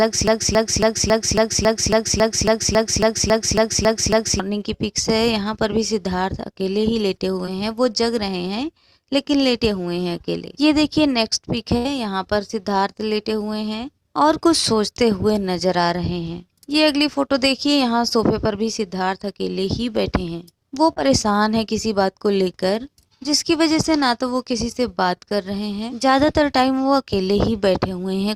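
Right from the start the clip is already stuck in a broken-record loop: a 275 ms fragment repeats exactly, back to back, fifteen times until about 4.40 s. That's likely a player or stream stalling and resending its last buffer, and whatever should have played there is gone.

At 7.45 to 7.49 s there's a short concealed packet loss. About 20 ms never arrived in time, so the decoder stretched the preceding sound to cover it, leaving a brief smear or wobble before blending back.

At 11.77 to 11.87 s a burst of packet loss takes out about 80 ms. The receiver carries the last sound forward while fading it, giving a held buzz or dying hiss, then jumps ahead with that stretch missing.

At 20.93 to 20.98 s there's another short concealed packet loss, this time around 40 ms missing and 36 ms patched over, heard as a quick wobble where a short sound may drop out.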